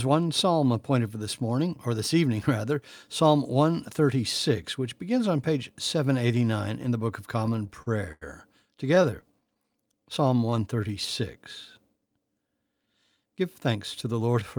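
Repeated stalls (stutter) at 7.39 to 8.23 s (seven gaps, longest 91 ms) and 8.95 to 9.57 s: late packets emptied the jitter buffer, so the last sound was extended. The speech drags, and the spectrogram shows brief smeared, repeated frames. A jitter buffer slow-down from 9.1 to 10.93 s repeats pitch periods, adding 176 ms. The speech runs at 91% speed with unchanged pitch, and the waveform shows duplicated cycles. A jitter buffer speed-up from 12.86 to 14.58 s cuts roughly 150 ms of pitch periods to shrink the delay. The speech runs at 107% speed and sounds hurried, with whole pitch cycles missing from the waveform.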